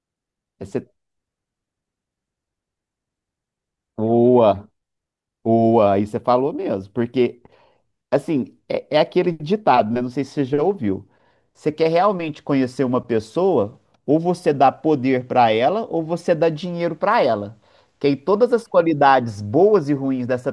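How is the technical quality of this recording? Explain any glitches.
Listening to the recording, no glitches or technical problems stood out at any point.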